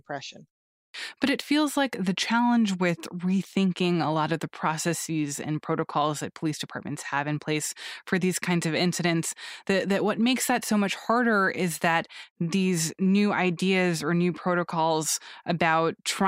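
At 0.88 s, after a pause of about 0.45 s, there's a clipped start after a pause: roughly 60 ms goes missing while the output wakes, so speech pops in abruptly.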